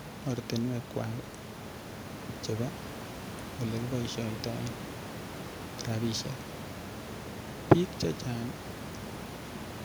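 Nothing goes wrong on the technical side anywhere in this speech recording; the only thing underneath it is the room's own background noise, sitting about 10 dB below the speech, and that's simply part of where it was recorded rather than anything the system did.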